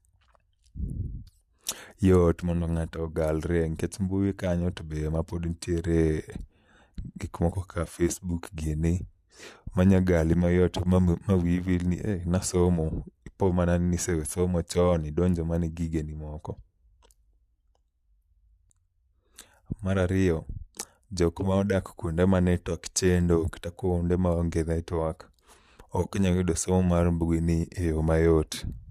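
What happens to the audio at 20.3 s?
Nothing goes wrong at 20.3 s: the speech carries on intact through that moment, with no dropout, click, glitch or change in level or tone.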